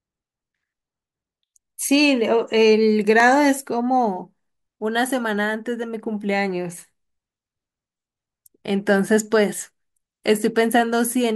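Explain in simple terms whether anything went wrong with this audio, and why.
Overlapping chunks at 3.20 s: the speech was handled in 5-second pieces, and at this join about 7 ms played twice, causing a brief click.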